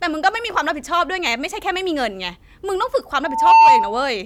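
At 3.23 s a loudspeaker feedback squeal begins: the microphone is hearing its own loudspeaker, and the loop gain passes unity at 898 Hz. The tone swells over about a third of a second to roughly 15 dB above the speech, then stops at 4.07 s. A spectrogram shows one bright horizontal line there, and the waveform's envelope balloons.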